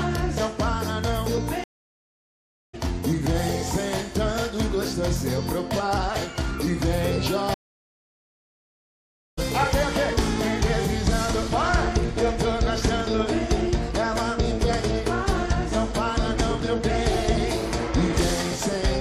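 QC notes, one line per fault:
1.64–2.75 s and 7.54–9.39 s, stream reconnect: the connection dropped twice, giving flat-line gaps of 1.10 s and 1.83 s. Playback resumes with a fresh decoder, about 0.7 s and then a full second further on, so material is skipped. The waveform shows a brief fade-in at each restart.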